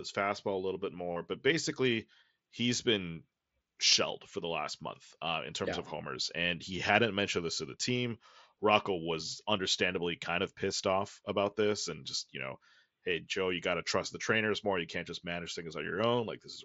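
At 1.12 to 1.16 s, concealed Bluetooth headset packet loss fills about 38 ms with a repeated slice of the preceding waveform. It is a buzzy, level-held tone with a brief warble on recovery, showing as evenly spaced harmonic stripes and a periodic waveform. A single, nearly hidden lost packet follows at 3.92 s, over the mSBC wideband band.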